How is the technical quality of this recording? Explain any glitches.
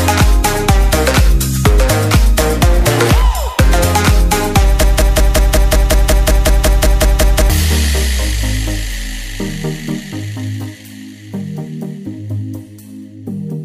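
The recording has one clear glitch: a broken-record loop from 4.83 s to 7.50 s. A fragment of about 185 ms repeats 14 times back to back, each copy identical, so the sound chatters in a rigid, machine-like rhythm instead of moving forward. This was likely caused by a stalled player, encoder or stream that kept replaying the last chunk it held, and the audio meant for those seconds is lost. Exact repetition with no decay sets it apart from an echo or reverb tail.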